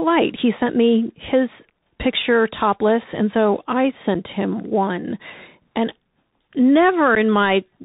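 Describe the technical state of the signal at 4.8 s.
At 4.8 s the speech sounds muffled and boxy, with nothing above 4 kHz, scratchy s sounds and a granular hiss underneath. That is the Bluetooth CVSD headset codec, present throughout: its one-bit up-or-down steps can't keep pace with loud high sounds, pointing to a 64 kbps narrowband headset link.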